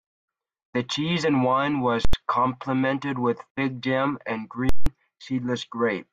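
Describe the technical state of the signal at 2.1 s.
At 2.1 s the speech is replaced by invalid numbers at full scale, spanning 2.05 to 2.13 s (about 85 ms, which fits a 4096-sample processing block). A calculation produced infinite or invalid values that became the largest positive or negative value, so the output sits flat at one extreme. It is heard as a very loud pop at 2.05 s and another at 2.13 s with no sound between. On the waveform it is a flat bar held far from zero, beyond the speech peaks. On the spectrogram it shows as two bright broadband vertical lines with an empty gap between them.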